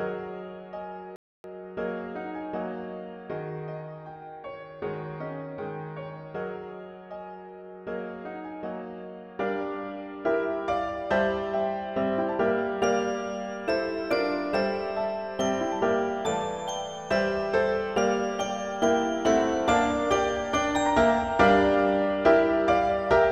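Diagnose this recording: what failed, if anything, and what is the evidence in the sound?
Playback stall at 1.16 s: the sound cuts to silence for about 0.28 s, then resumes, likely the player starving for data or its thread getting blocked.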